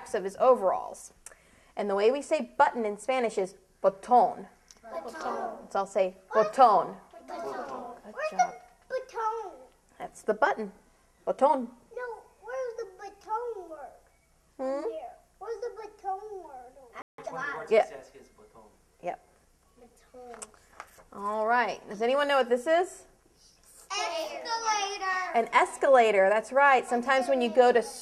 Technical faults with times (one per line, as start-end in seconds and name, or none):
17.02-17.18 playback stall
17.18-17.82 time-compressed catch-up